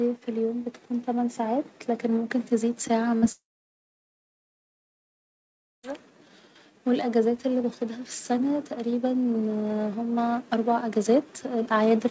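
From 0.25 to 2.38 s the level of the speech and its background climbs together, smoothly, by about 4 dB. There is no single step, just a steady swell over roughly two seconds. This is automatic gain rising. The gain control judged the incoming level too low and raised its amplification bit by bit, so everything it passes, the noise floor included, comes up at the same rate.

At 3.18 s there is a brief smear lasting about 40 ms, from 3.18 to 3.24 s. The sound is stretched on from what came just before and then blended back into the real signal. This is short concealed packet loss. That slice of audio reached the decoder too late, so the receiver synthesised a continuation of the preceding sound to bridge the hole rather than leave a gap.

Only a moment later, from 3.32 to 5.85 s, the audio breaks off for about 2.5 s. A fading continuation of the last sound gives way to near silence, about 2.4 s of it. 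The speech then resumes further on, with that stretch gone. The likely cause is a long network dropout: nothing arrived for the whole span, so the concealment ran out and the missing audio was never played. Throughout the clip, nothing is heard above 8 kHz, which fits a wideband call codec such as G.722 at 64 kbps.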